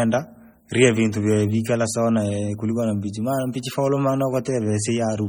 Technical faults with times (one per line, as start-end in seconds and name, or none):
0.00-5.29 MP3 compression